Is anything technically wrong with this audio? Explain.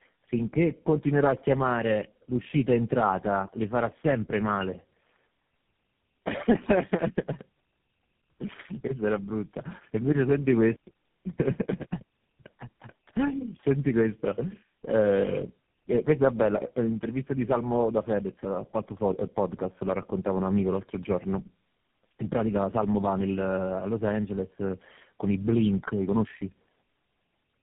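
Yes. Tandem speech coding runs throughout: three low-rate codecs in a row re-encode each other's output, leaving speech rough, muffled and warbly, with nothing above 3.4 kHz.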